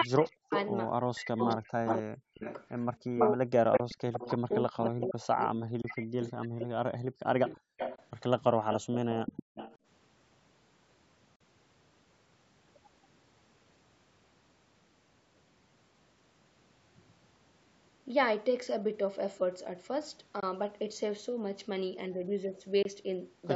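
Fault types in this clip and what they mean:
Speech suppressed in double talk: For roughly the first 7.7 seconds, the voice keeps ducking, thinning and breaking into pieces, sometimes by around 40 dB. That's likely the echo canceller treating the overlap as echo and pulling down the near talker along with it.
Echo leak: A copy of the voice trails it by 326 ms, likely from echo the canceller didn't fully remove. From 0.24 to 5.06 s it's about as loud as the speech itself, there's a tiny blip near 6.3 s, and it's about 5 dB under the speech from 7.48 to 9.78 s.
Bluetooth dropout: Short, hard-edged holes of silence, after which the audio picks up as if it kept running underneath. Most last 21.3 ms, at 3.77, 5.82, 7.96, 20.40 and 22.82 s, with a 42.7 ms gap at 11.36 s. These likely come from one or two lost wireless packets.
Background gated by the echo canceller: Between 9.43 and 9.55 s, the room sound briefly drops by about 36 dB and then comes straight back. 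It's the canceller clamping the microphone hard while the loudspeaker plays, then letting go again.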